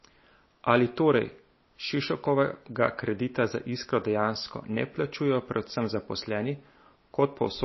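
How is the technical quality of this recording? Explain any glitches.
The technical quality is poor, with one fault present across the whole recording. Likely MP3 compression throughout: the speech is cut off above 5.8 kHz, which fits a low bitrate around 24 kbps, and weak frequency lines flicker between frames, giving a watery, swirly sound with smeared attacks.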